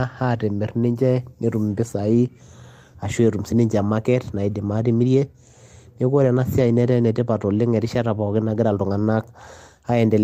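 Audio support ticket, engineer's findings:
No faults found on listening; nothing to escalate.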